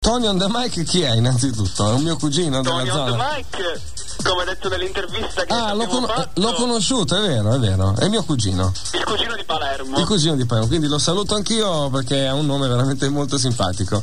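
Sharp single clicks sound at 2.27, 11.62 and 12.50 s. These are likely dropped samples, where a handful go missing and the waveform jumps.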